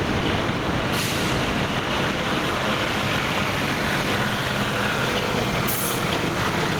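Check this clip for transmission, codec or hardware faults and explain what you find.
Gain pumping runs through the whole clip. The gain ducks by around 10 dB under each loud sound, squashing the dynamics. The likely cause is input gain set far too high, with a fast limiter clamping every peak.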